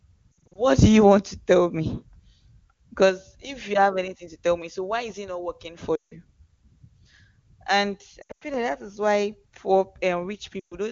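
Lost AMR speech frames break up the audio four times: 0.32 to 0.58 s, 5.96 to 6.14 s, 8.21 to 8.44 s, and 10.59 to 10.76 s. Radio errors corrupted the frames. The decoder then repeated the last good pitch and vocal tract settings at falling gain. The first and third events are scattered, with runs up to 60 ms and 100 ms, so they warble and dip. The others drop to near silence within two frames. The voice then returns briefly rough, against otherwise clean wideband coding.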